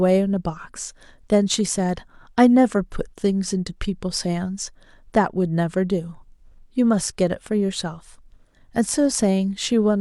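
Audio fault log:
Nothing to log here; the speech comes across without a single fault worth noting.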